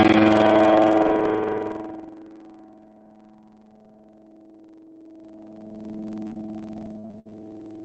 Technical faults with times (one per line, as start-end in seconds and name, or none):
0.00-7.85 buffer tearing
6.27-7.33 repeated packet loss (robotic sound)